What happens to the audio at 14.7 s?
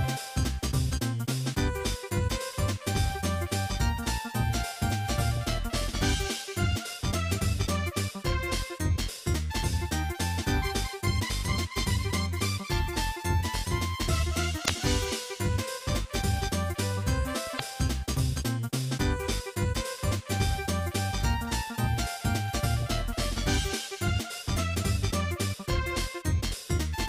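From 14.62 to 14.70 s, about 80 ms, there is damaged data in a compressed stream. Corrupted bytes make the decoder misread frames and lose sync until it finds the next frame header, producing a brief glitchy blip. A spectrogram shows a short broadband smear, and the waveform shows an abrupt discontinuity.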